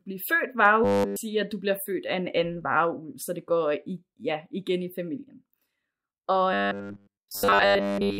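From 0.84 to 1.16 s, and again from 6.53 to 8.19 s, the speech collapses into robotic sound from repeated short buffers: a rigid metallic buzz at 100 Hz, likely from a 10 ms block being looped while essentially all incoming audio is skipped.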